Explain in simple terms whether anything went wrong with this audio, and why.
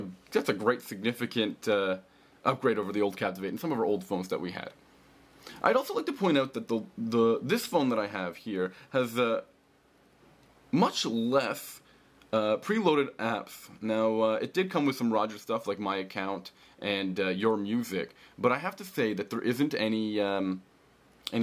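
Nothing went wrong here: the signal stays steady and intact the whole way, with no technical faults to point to.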